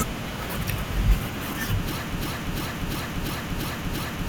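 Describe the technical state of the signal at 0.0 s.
At 0.0 s the signal is intact, with no audible fault at that point.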